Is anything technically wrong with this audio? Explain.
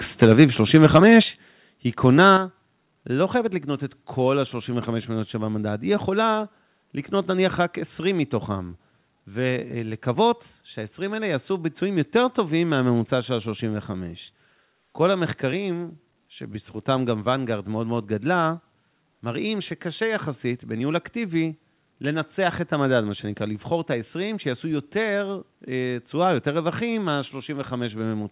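Yes. Microphone overload hits at 0.22–0.44 s, 0.74–1.19 s and 2.19–2.30 s. The peaks run about 4, 6 and 1 dB past the converter's limit, and their tops flatten into a harsh crackle. On a waveform these look like squared-off plateaus, and on a spectrogram they show as broadband smear. An input level set too high is the likely cause.

The microphone volume steps down at 0.24 s, 1.23 s and 2.37 s, by about 3, 7 and 7 dB. Voice and background drop together as a sudden stair-step in the waveform envelope, which likely comes from software cutting input gain in response to the distorted peaks.

The call path's telephone-band codec leaves nothing above 4 kHz.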